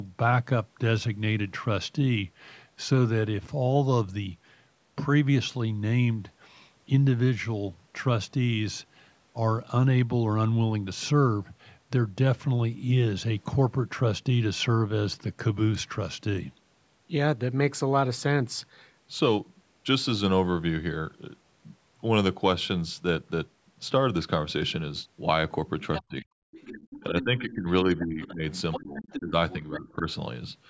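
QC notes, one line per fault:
25.94–26.02 s, 26.51–27.52 s, 28.00–28.33 s, 28.72–29.19 s, 29.50–29.78 s, other side's voice leaking through: The echo canceller likely left part of the far-end loudspeaker signal in the microphone feed. A second, fainter voice surfaces in brief scraps and one stretch of about a second, roughly 10 to 20 dB under the main talker.
25.99–26.30 s, 27.01–28.44 s, 28.80–30.06 s, speech suppressed in double talk: With both sides talking at once, the canceller probably couldn't tell its own talker from the echo, so it turned both down. The main speech drops in pieces, by about 35 dB at its deepest in the first dip and around 20 dB in the later two.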